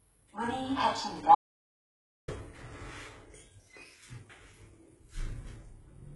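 From the start, the everyday sound carries heavy damage that points to HE-AAC compression, likely at a very low bitrate of around 12 kbps. The lower spectrum is coded directly. The treble is synthesised by copying lower bands upward, so high detail sounds grainy and metallic, with harmonics that no longer align. On a spectrogram the upper region looks smeared and blocky, with repeated patterns, and everything stops at a hard ceiling near 11.5 kHz.

At 1.35 s the audio drops out to silence and stays dead until 2.28 s, a gap of about 0.93 s. This is likely a lost input, such as a disconnected device or failed link, while recording carried on writing silence. There is no fade and no room tone, only an abrupt cut and an equally abrupt return. Whatever happened in that stretch is gone. The waveform shows a flat line, and the spectrogram shows a solid black vertical band across all frequencies.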